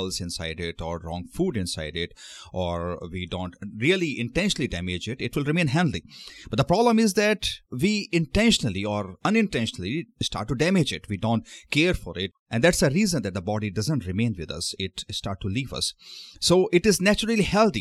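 No technical faults are audible.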